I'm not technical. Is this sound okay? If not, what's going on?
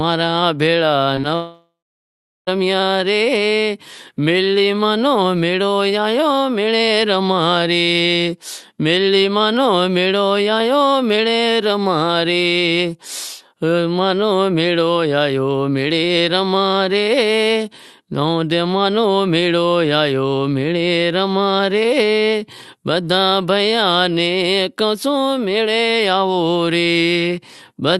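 No. Between 1.15 and 1.19 s, and again between 1.21 and 1.25 s, there is short concealed packet loss: tiny bits of the call arrived too late, so the receiver patched them with a brief smear rather than a gap.

From 1.35 to 2.49 s comes something longer, likely a long network dropout. The sound stretches into a fading buzz or hiss, then goes silent for about three-quarters of a second, and resumes with that stretch missing.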